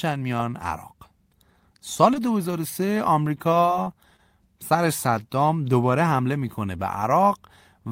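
Brief smears or wobbles interrupt the speech at 2.14, 3.60, 3.84 and 4.16 s. These are short concealed packet losses: each time, about 20 ms of audio arrived too late, and the receiver patched the gap by extending the preceding sound before blending back.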